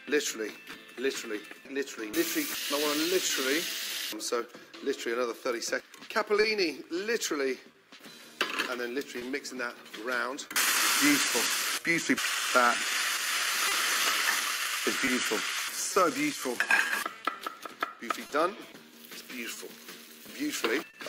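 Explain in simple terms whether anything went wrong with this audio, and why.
The sender's clock runs about 2% slow compared with the receiver's. That's clock drift between sender and receiver, and it leaves the playback buffer chronically short on audio.

From 0.04 to 6.01 s you get repeated timing corrections. The receiver keeps stretching bits of sound, adding about a tenth of a second in total.

At 3.27 to 3.32 s there's a short stall from a late packet. A packet arrived 30 ms late, so the last sound was held for 30 ms, with nothing lost.

From 6.4 to 21.0 s there are scattered short gaps, around fifteen of them, each up to about 30 ms. Each one was patched by extending the previous sound, so you hear small ticks or smears.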